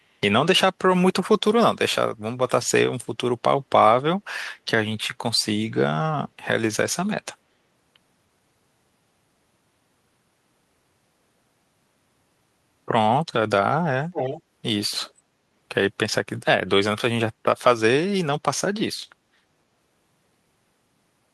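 From 14.13 to 14.42 s a strong echo leak repeats the speech about 300 ms late at nearly the original level. Another, much fainter scrap follows at 15.02 to 15.12 s. Both likely come from a far-end loudspeaker whose echo canceller let its microphone pickup through.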